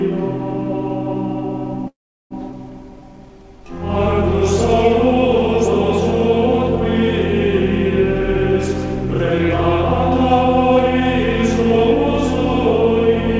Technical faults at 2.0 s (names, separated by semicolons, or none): call audio freeze